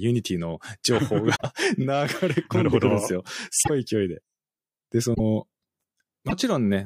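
Broken MP3 bit reservoir at 1.35–1.42, 3.62–3.70, 5.14–5.20 and 6.28–6.33 s: the speech jumps ahead, then 44 to 82 ms come out garbled, which fits two or three 26 ms frames. The likely cause is dropped frames, so the following frames decode borrowed reservoir bytes from the wrong frame.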